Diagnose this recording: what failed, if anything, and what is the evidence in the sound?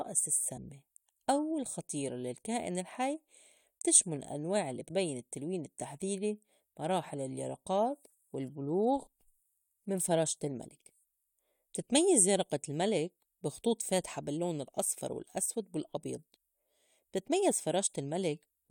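Compressed frames skipped in the codec. Speech jumps ahead at 0.56, 4.87–4.91, 8.09–8.15 and 16.35 s. Whole frames are missing.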